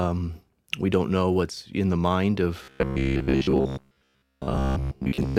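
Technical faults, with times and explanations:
2.64 to 5.38 s, robotic sound from repeated short buffers: the speech becomes a rigid metallic buzz at 66.8 Hz, likely from roughly 15 ms chunks replayed in place of most new audio. Unlike a stutter, one fixed pitch persists while the words stay roughly traceable.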